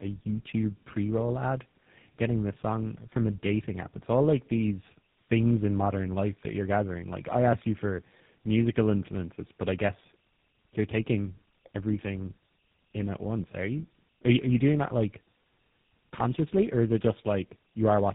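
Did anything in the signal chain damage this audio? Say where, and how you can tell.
Yes, at the codec stage: tandem speech coding throughout. Nothing reaches above 3.8 kHz, and the speech is rough, muffled and warbly beyond what one coder causes, which points to something like G.729A and then GSM full rate, the later one re-coding the earlier one's degraded output.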